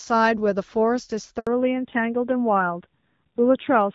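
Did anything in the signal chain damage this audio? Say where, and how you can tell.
Yes. Handover gap, 1.39 to 1.47 s, network stage: speech drops out for 80 ms because no frames arrived while the call switched links.

Fallback to narrowband, 1.47 s onward, codec stage: everything above 4 kHz vanishes and speech turns duller and rougher, which fits a switch from AMR-WB to AMR-NB.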